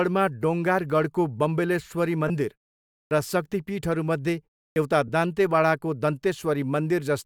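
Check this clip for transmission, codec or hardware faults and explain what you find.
Two kinds of fault show up in this speech: brief Bluetooth LE Audio dropouts and wake-up clipping at the output device.

Lost LE Audio frames occur at 2.28–2.30 s, right after "डोङ्गारगढको बम्बलेश्वरी", and again at 5.08 s. Audio went missing in transit, about 20 ms and then 10 ms, which fits two 10 ms frames and then one. The LC3 decoder filled each gap by reusing the last spectrum with random signs, so the sound briefly turns into a short noisy smear.

Clipped start after a pause happens at 3.07–3.11 s, following a 0.58 s pause, and at 4.72–4.76 s, following a 0.32 s pause. The output device went idle during each silence and needed time to wake, swallowing roughly 40 ms both times. Speech therefore begins abruptly, missing its opening sound.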